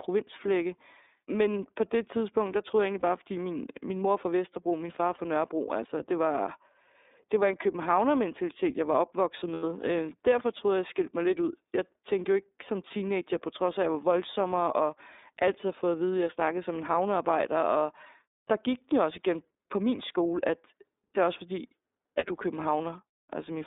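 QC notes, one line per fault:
Throughout, iLBC codec: the band is held to roughly 250 Hz to 3.7 kHz, so the speech sounds thin and a bit rough and synthetic. The damage is plainly audible. It fits iLBC's 13.33 kbps mode with 30 ms frames, each coded on its own.
3.0 s, 5.15 s, 9.53 s and 22.19 s, lost iLBC frames: short dropouts where the decoder repeats the last pitch cycle mixed with noise, so each gap comes out as a brief buzzy, held vowel. Most are about 30 ms: after "der troede jeg egentlig" and before "fordi min min mor", after "min far", and after "det er også fordi" and before "du er". The one at 9.53 s is longer, about 90 ms, and fades. The speech recovers almost straight away each time.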